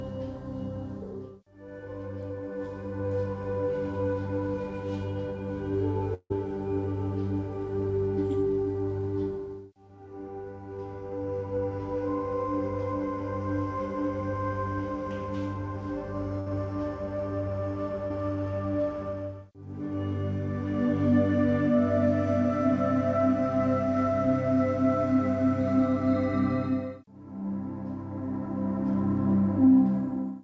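From 6.14 to 6.32 s the sound stretches into a fading buzz or hiss that dies to about 50 ms of silence, then resumes with roughly 160 ms lost. The likely cause is a long network dropout, and the silence sets it apart from shorter losses.

At 16.40 to 16.48 s a burst of packet loss leaves the last sound continued and fading for about 60 ms. It never reaches silence before the audio jumps ahead.

At 18.08 to 18.12 s a short concealed packet loss fills a 20 ms gap. It is heard as a brief smear that blends straight back in.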